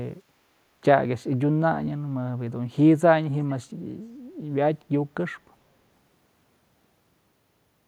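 From 0.22 to 0.70 s the room sound behind the speech sinks by about 7 dB and comes back, with the dips adding up to around 0.4 s. This is background gated by the echo canceller: while far-end audio was playing, the canceller pulled the microphone down to stop it being sent back.

At 3.48 to 3.53 s a brief, very faint scrap of repeated speech surfaces, far below the main voice, trailing it by about 404 ms. That fits an echo leak, likely from a loudspeaker-playing end whose echo canceller failed to remove everything its microphone picked up, so a remnant was sent back. The fixed, long delay distinguishes it from room reverberation, which would be immediate and continuous rather than a discrete late copy.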